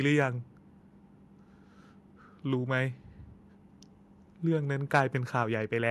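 From 4.95 to 5.00 s the loudest speech peaks flatten into a brief harsh crackle, likely microphone overload driving the converter about 4 dB past its limit; unlike codec distortion, it tracks only the peaks. At 5.43 s voice and background drop together by about 3 dB in one clean step, likely a microphone volume stepped down rather than a gradual fade.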